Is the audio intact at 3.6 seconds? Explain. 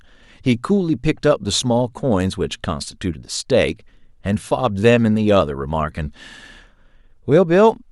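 Yes, the speech at 3.6 seconds is intact, with no dropout, click, distortion or other fault at that moment.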